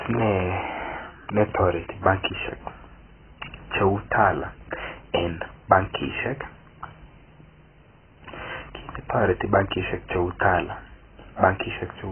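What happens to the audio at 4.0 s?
At 4.0 s the speech sounds dull, smeared and warbly, with nothing above 3.1 kHz, as it does throughout. The likely cause is heavy AAC compression: AAC-LC at a bitrate that sounds near 12 kbps drops the upper bands and coarsely quantises the rest.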